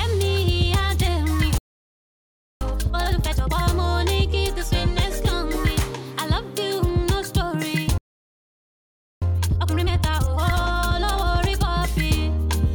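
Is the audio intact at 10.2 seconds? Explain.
No. From 9.22 to 11.68 s the audio is in a time-compressed catch-up: after a stall, the player clears its backlog by dropping short slices and cross-fading the joins. At 1.5 times normal speed, the sound is hurried but holds its pitch.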